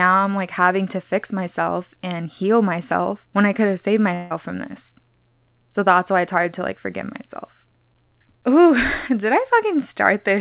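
From 4.14 to 4.32 s, a long network dropout likely halted incoming packets: about 160 ms after "I could have saved" is lost, bridged by a fading buzz or hiss until "from this".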